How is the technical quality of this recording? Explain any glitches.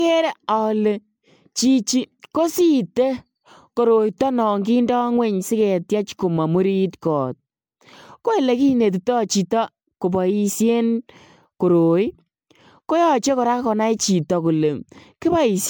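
The technical quality is compromised throughout by generation loss across the whole speech recording. The sound has a swirly, hollow, smeared character, with consonant attacks blurred rather than crisp. That points to audio likely decoded and re-encoded around seven times through a lossy MP3 stage, consistent with 128 kbit/s. Each pass requantises on a shifted frame grid, so noise and spectral holes accumulate. A spectrogram would show patchy, flickering gaps in the upper bands below a ceiling near 20.1 kHz, and the waveform's transients would look softened.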